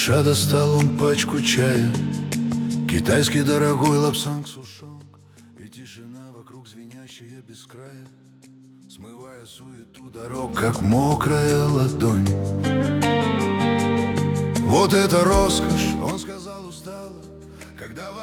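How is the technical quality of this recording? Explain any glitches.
One glitch stands out, between 4.09 and 4.74 s: zipper noise. The level drops by roughly 25 dB in 2 dB steps, about twenty per second, with no smoothing, so each jump ticks. On a spectrogram these appear as faint vertical lines; the waveform shows a staircase-shaped envelope.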